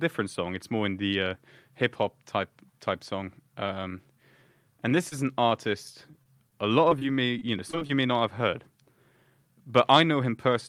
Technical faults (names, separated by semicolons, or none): short stall from a late packet; short concealed packet loss; repeated packet loss (robotic sound)